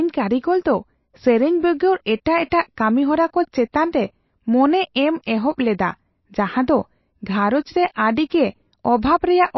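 MP3 compression runs through the whole recording: nothing is present above 5.8 kHz, and the codec damage is plainly audible. The likely cause is an encoder starved of bits, which fits a rate near 28 kbps. It chops off the treble at a fixed point and drops weaker frequency lines that flicker in and out between frames. The speech therefore sounds dull and watery, with a swirling texture and smeared consonant attacks.

Pre-echo appears at 2.50 s, where a short hiss of about 16 ms comes just before a sharp onset. The codec spreads quantisation noise across its entire transform block. Because the attack falls late in that block, noise scaled to the loud moment spills into the silence ahead of it. The result is a smear of noise leading into the onset, which loses its crispness and sounds softened.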